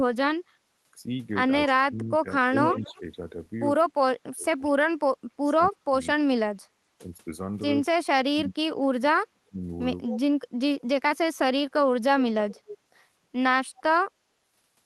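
Speech that has passed through a call path shows two faults. Speech suppressed in double talk dips the talker by about 25 to 35 dB from 1.67 to 3.02 s, 3.84 to 6.63 s and 7.89 to 9.58 s. The likely cause is an echo canceller muting the near voice while the far side also speaks. Unlike echo, this removes sound rather than adding any. Echo leak adds a delayed copy of the voice, about 242 ms late and roughly 10 to 30 dB down, at 2.67 to 3.0 s, 10.09 to 10.2 s, 12.51 to 12.78 s and 13.76 to 13.83 s. It is likely loudspeaker pickup that escaped cancellation, and it differs from suppression by being an extra trailing repeat.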